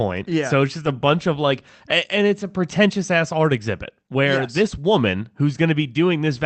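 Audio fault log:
No fault to log for this speech clip; it came through a call path whose limited bandwidth is part of its normal behaviour.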